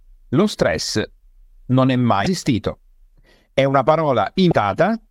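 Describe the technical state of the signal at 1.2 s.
At 1.2 s the speech signal is intact, with no dropout, clipping, glitch or other technical fault at that moment.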